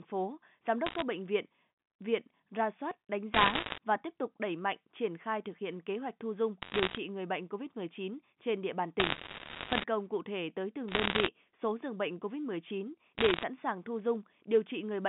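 Telephone speech over a G.711 line, 150 Hz to 3.6 kHz, has bursts of bit errors on a digital phone line at 0.86–1.02, 3.34–3.78, 6.62–6.98, 9.00–9.84, 10.88–11.28 and 13.18–13.43 s. Flipped bits corrupt single samples, producing sharp ticks and crackle, heaviest at 3.3 and 9.0 s.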